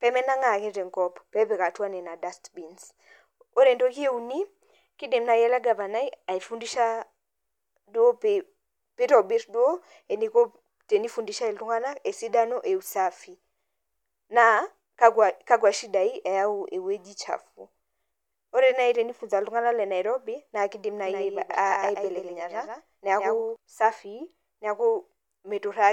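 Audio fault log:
21.06–23.56 s, doubled audio track: just after "naa keidim", a second full-band copy of the speech sits roughly 150 ms behind the original and about 5 dB quieter. This produces a distinct slapback repeat rather than a reverberant tail, with no decay or room colour. The copy cuts in and out abruptly at both ends. The likely cause is the same signal being captured twice, with one path running slower, or an edit holding two offset copies.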